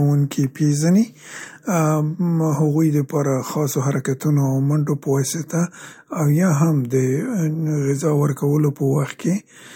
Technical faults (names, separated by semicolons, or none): none